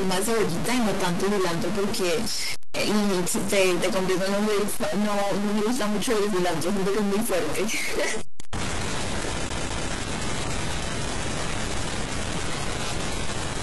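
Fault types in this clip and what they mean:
Stuck bit: A distortion runs through the whole speech clip, and the pauses are filled with noise instead of silence. The likely cause is one data bit held at a fixed value by a broken line or converter, offsetting many samples.
Adaptive stream at a lower bitrate: From 8.06 s to the end, quality drops suddenly with no gap. Nothing remains above 11.4 kHz. This fits a switch from roughly 96 kbit/s AAC to a 12 kbit/s HE-AAC version.
CD stuck on one turn: Between 9.49 and 9.90 s, a 207 ms stretch of audio is repeated twice in a row. A brief mute marks each jump. It gives the quick, even stutter of a laser thrown back one track by a scratch.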